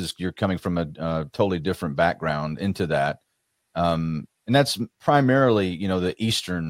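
No audible technical faults.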